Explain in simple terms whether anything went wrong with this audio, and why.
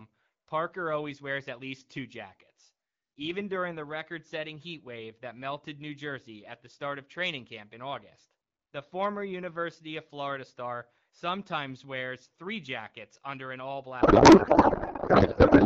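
Something goes wrong near the end. From about 14.0 s until the clip stops, the speech turns into garbled noise and warble. This is a codec payload misread. The receiver unpacks the AMR wideband bits in the wrong layout, which fits octet-aligned frames being read as bandwidth-efficient ones.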